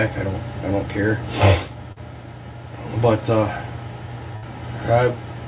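Audio carried over a call link, band-limited with nothing above 4 kHz (which fits narrowband G.711 mu-law coding at 64 kbps), carries two concealed gaps. At 1.92 to 1.98 s there is a short concealed packet loss: about 40 ms of audio never arrived in time, and the receiver covered it with roughly 42 ms of synthesised continuation of the preceding sound before crossfading back to real signal. By ear it is a brief smear or wobble. On a spectrogram the harmonics or noise texture flatten into a short, overly regular patch. In the waveform a repeated-looking cycle pattern replaces the natural variation. At 4.36 to 4.44 s a burst of packet loss removes about 60 ms, bridged by some 59 ms of extrapolated sound that is progressively attenuated. It is heard as a held buzz or fading hiss, then the audio jumps ahead with that stretch missing. A spectrogram shows frozen, smoothly decaying bands ending in a discontinuity. 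The waveform shows a tapering envelope followed by an abrupt resumption.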